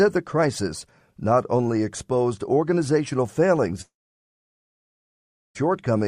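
At 3.81 s the audio stops and trails off as a fading buzz or hiss, then sits in near-silence for about 1.65 s before resuming at 5.57 s with roughly 1.74 s of material gone. That's likely a long network dropout, with the receiver padding over the gap.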